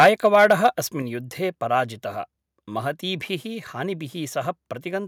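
Microphone overload, from 0.0 to 0.67 s: the speech peaks overshoot the converter's limit by about 9 dB, so their tops are sliced flat, with a few percent of samples clipped. The loudest syllables take on a harsh, crackling edge, likely because the microphone input level was set too high.

Microphone volume stepped down, at 0.03 s and again at 1.02 s: the voice and background fall together in sudden steps, about 2 dB and then about 5 dB. This is likely the call software reacting to the overload by lowering the device's input gain in single jumps.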